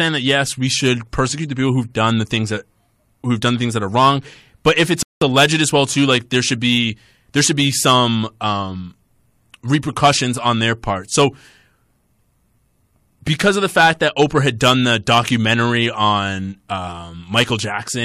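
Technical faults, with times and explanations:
5.03 to 5.22 s, rebuffering stall: playback ran dry after "wrong but if it's" and paused about 0.19 s, resuming intact at "alleged as well too".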